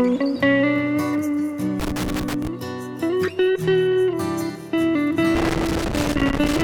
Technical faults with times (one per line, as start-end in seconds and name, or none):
1.80-2.47 loose connector crackle
5.35-6.63 loose connector crackle